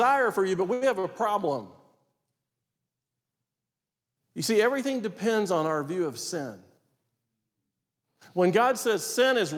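Speech, with two short stalls from a late packet: at 0.73 to 0.84 s the sound is held for about 80 ms, and at 0.99 to 1.07 s for about 42 ms. Each time the jitter buffer ran dry and the receiver extended the last sound until the packet arrived, so nothing is lost, but playback slips later each time.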